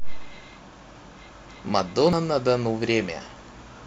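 A speech clip with one brief glitch at 2.13 s, the sign of damaged data in a compressed stream: corrupted bytes made the decoder misread a frame and resync at the next header.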